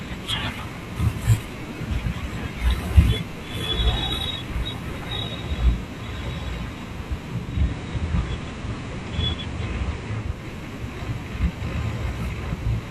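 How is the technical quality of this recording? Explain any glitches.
One glitch affects the recording. Digital radio blending to analogue runs from 7.35 to 10.50 s. The receiver lost its digital stream and cross-faded over about 0.41 s to the station's FM broadcast, then back. During that stretch a faint hiss sits well beneath the speech, and the level shifts by about 1 dB.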